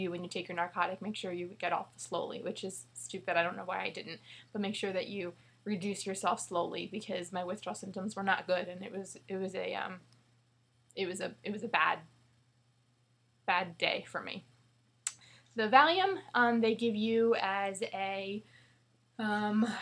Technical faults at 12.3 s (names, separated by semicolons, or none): none